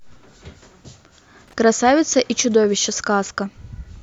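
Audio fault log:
1.48–1.53 s, loose connector crackle: a brief, irregular, scratchy burst as a worn contact chops the signal, ragged rather than one clean digital click.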